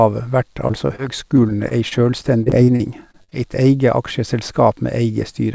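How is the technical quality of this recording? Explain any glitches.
The technical quality is poor because of repeated packet loss (robotic sound) from 0.68 to 1.00 s (four gaps) and from 1.36 to 3.33 s (thirteen gaps, the longest 47 ms). Lost packets are patched by extending the preceding sound, leaving choppy speech with pieces missing. A spectrogram shows smeared, repeated frames and brief dropouts. The audio has nothing above 8 kHz, which fits a G.722 call codec.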